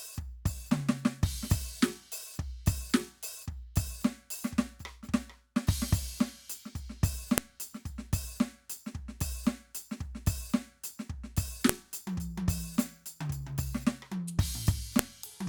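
Sharp, loud clicks cut through the music at 7.38, 11.69 and 14.99 seconds. This is a file header played as audio. Joined pieces kept their header bytes, which play as samples.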